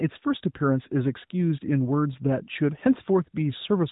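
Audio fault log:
The speech comes through the AMR narrowband mobile codec with nothing above about 3.8 kHz and only light coding texture, which fits the codec's highest 12.2 kbps mode, and no faults are present.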